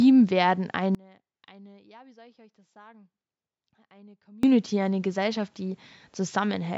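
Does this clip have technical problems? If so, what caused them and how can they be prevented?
Yes. From 0.95 s to 4.43 s the speech drops out abruptly for about 3.5 s, leaving only a faint residue some 30 dB below normal level before it snaps back. This audio dropout to a faint residue likely comes from the signal path breaking while the channel stayed open. A stable connection with buffering and retransmission prevents it.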